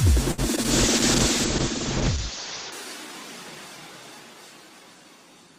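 At 0.31 to 0.40 s there is a short stall from a late packet. A packet arrived late, so the receiver held the last sound for about 65 ms, then resumed.

At 0.56 and 0.63 s come two short concealed packet losses. About 20 ms of audio went missing each time, and 12 ms was patched with an extension of the preceding sound, heard as brief smears.

From 0.71 to 2.78 s there is a call bitrate drop. The sound turns rough and muffled, with high frequencies cut from 20 kHz to 8 kHz. This fits a fall from about 32 to 8 kbps.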